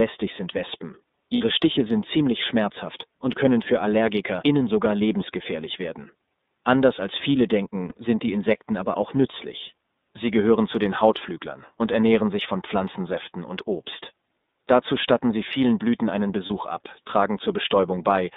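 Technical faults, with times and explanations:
Throughout, iLBC codec: the speech is squeezed into a narrow telephone band, roughly 200 Hz to 3.7 kHz, so there's no air up top, and each 30 ms frame is coded on its own, which leaves the voice clearly rough and a bit synthetic, consistent with 13.33 kbps iLBC.
1.35 to 1.41 s, lost iLBC frames: about 60 ms goes missing and the decoder fills it by looping the last pitch cycle with some noise mixed in, giving a short buzzy held vowel. Since frames stand alone, clean speech returns immediately after.
7.89 to 7.93 s, lost iLBC frames: a shorter 30 ms dropout between "als viele" and "sind die", concealed the same way with a brief repeated pitch cycle that sounds faintly breathy and stretched, then the next frame decodes cleanly with no lingering smear.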